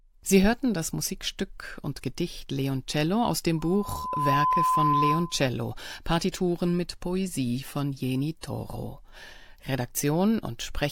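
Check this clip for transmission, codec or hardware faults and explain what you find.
One hardware fault is present: loudspeaker feedback squeal, from 3.58 s to 5.46 s, starting just after "aus dem". A microphone is picking up the loudspeaker it drives, and around 1 kHz the loop gain has climbed above one, so that frequency keeps recirculating and reinforcing itself. On the recording a pure 1 kHz tone swells up over well under a second, then holds as a steady squeal roughly 5 dB louder than the speech until it stops at 5.46 s.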